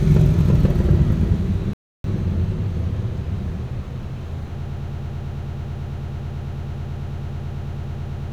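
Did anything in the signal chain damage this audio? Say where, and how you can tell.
Yes. Rebuffering stall, 1.73 to 2.04 s, at the playback stage: the player's buffer ran dry, adding about 0.31 s of silence before the sound resumed exactly where it stopped.

Broken-record loop from 4.62 s to the end: a 110 ms fragment repeats back to back, and the audio that should follow is lost. Likely a stalled player, encoder or stream resending its last fragment.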